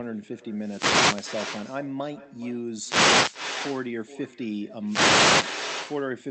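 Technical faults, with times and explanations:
Throughout, echo with no canceller: the far end's loudspeaker feeds its microphone, so every phrase returns roughly 0.4 s later, about 15 dB quieter and thinner.
0.52–1.48 s, 2.73–3.47 s, 4.85–5.53 s, wireless microphone noise hit: the radio signal fades, and receiver noise swells into bursts of static over the speech.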